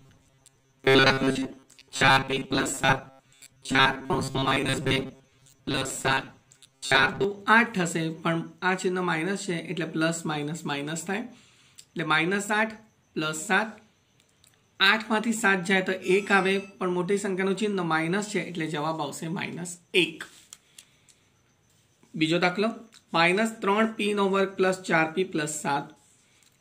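From 0.01 to 7.24 s the sound becomes a rigid, metallic buzz near 134 Hz: robotic sound from repeated short buffers. The likely cause is audio arriving too slowly, so a segment of about 7.5 ms was looped in place of roughly two thirds of the real signal.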